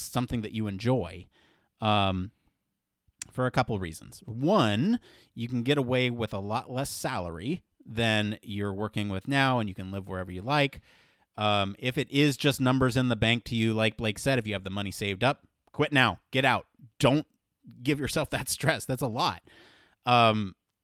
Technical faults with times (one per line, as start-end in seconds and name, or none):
7.73-9.50 scattered short gaps